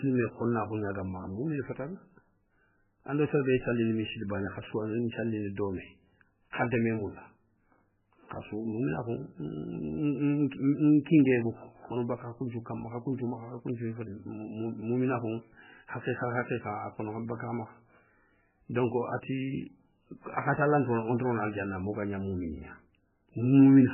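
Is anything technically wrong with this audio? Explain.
Yes. MP3 compression, throughout the clip: nothing is present above 3 kHz, and the damage is heavy, which points to a very low bitrate, around 8 kbps, as the likely cause. Starved of bits, the encoder has cut the treble at a fixed frequency and dropped weaker frequency lines that flicker on and off between frames. The speech sounds dull and muffled, with a watery, swirling texture, metallic chirps on s sounds, and smeared consonant onsets.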